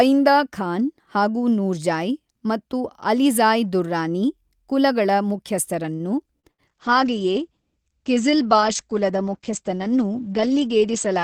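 At 5.95 to 6.03 s there is a short stall from a late packet. The jitter buffer ran dry, and the receiver held the last sound for about 44 ms until the packet arrived. Nothing is lost, but the sound lingers with a faint buzz or dip. On a spectrogram the harmonics run flat, and everything after it sits about 44 ms later.

At 6.40 to 6.46 s comes a short concealed packet loss. About 40 ms of audio never arrived, and 33 ms of extrapolated sound covers the hole before blending back. It is heard as a quick smear or wobble. The waveform shows a brief, over-smooth patch where detail vanishes.

At 6.51 to 6.62 s a burst of packet loss follows. About 80 ms of audio is gone, and roughly 71 ms of concealment bridges it. The continued sound fades into a held buzz or hiss before the audio resumes further on. On a spectrogram this shows as a smeared, decaying band with a clean break where real sound returns.

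From 6.69 s to the end, a call bitrate drop sets in. The sound turns rough, watery or muffled, which fits the encoder falling from about 48 kbps to 9 kbps. At that rate the bandwidth also narrows from 20 kHz to 8 kHz. A spectrogram shows everything above 8 kHz cut off, with blocky, coarse texture below.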